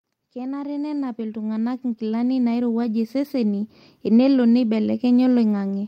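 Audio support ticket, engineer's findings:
Speech and background swell together, about 14 dB louder from 0.19 to 3.73 s. Automatic gain rising: AGC judged input too quiet, ramped gain up slowly.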